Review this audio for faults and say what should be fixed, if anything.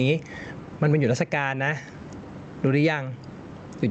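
Gain pumping runs through the whole speech clip, with the level swinging by roughly 15 dB. Loud and quiet syllables sit unnaturally close together, giving a squashed sound. The likely cause is input gain set far too high, with a fast limiter or automatic gain stage clamping down on each loud sound and releasing in the gaps. The call codec's high-frequency cutoff near 8 kHz is audible as well. To prevent it, lower the microphone gain and slow or relax the limiter or automatic gain control so it stops riding the noise floor.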